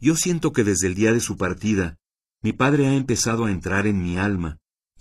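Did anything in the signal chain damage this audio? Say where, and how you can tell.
Yes. From 1.01 s to the end of the clip at 5.00 s the speech abruptly loses its air and takes on a swirly, synthetic top end, with no gap at the switch. Nothing survives above 12.3 kHz. This is an adaptive stream at a lower bitrate: at the network and codec stage, the player dropped from a full-band rendition to a low-rate one. The sound fits a fall from roughly 96 kbit/s AAC to a 16 kbit/s HE-AAC stream, whose high band is rebuilt by spectral band replication rather than coded.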